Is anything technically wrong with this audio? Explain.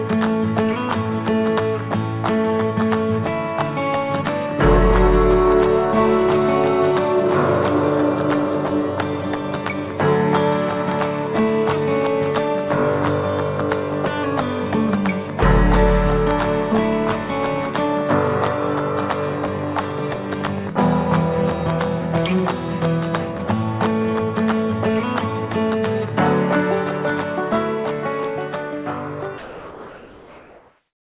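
Yes, there are two problems worth flagging.

From 17.50 to 21.87 s there's a train of clicks, a steady ticking laid over the sound at about 11.7 clicks per second, so around fifty in all, evenly spaced and much alike in shape. They peak roughly 5 dB above the surrounding audio, and they keep going through the quiet gaps too. The regular pace most likely points to interference from nearby equipment or a faulty connection or power supply injecting the same pulse over and over.

From 29.38 s to the end, about 1.63 s, the real background is swapped for comfort noise. This shows up as a flat, smooth hiss with none of the texture of the ambience before it, and about 2 dB quieter. The background there sits around 24 dB below the loud parts. The likely cause is discontinuous transmission: the sender stopped sending audio once its voice detector heard nothing, and the receiver filled the pause with synthetic noise roughly matched to the background. 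Everything also sits below 4 kHz, which fits a G.711 call path.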